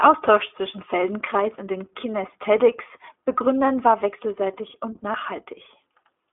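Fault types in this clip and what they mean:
iLBC codec: narrowband, slightly rough and synthetic speech with plainly audible coding damage, nothing above about 3.8 kHz, from independently coded 20 ms frames at 15.2 kbps.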